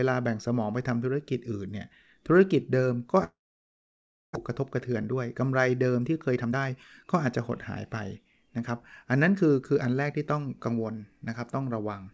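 Speech over a call path whose band stops at 8 kHz, consistent with G.722 at 64 kbps, carries a long network dropout from 3.24 to 4.37 s. The last sound is stretched into a fading buzz, then nearly a second of silence or low steady noise follows, and speech resumes with about 600 ms never heard. The likely cause is a burst of packets that never arrived while the delay grew by about half a second.

Jitter buffer speed-up follows at 4.49 to 5.42 s (107%, about 70 ms removed), 6.00 to 7.50 s (114%, about 200 ms removed) and 7.90 to 10.68 s (107%, about 200 ms removed). Having built up a surplus after the dropout, the receiver trims pitch-period-sized slices repeatedly. The speech therefore runs faster at unchanged pitch and sounds hurried, fastest in the middle stretch.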